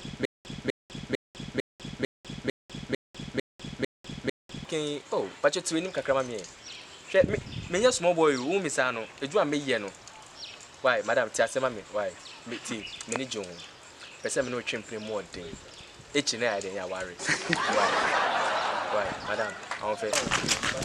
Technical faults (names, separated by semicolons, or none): stutter with silent gaps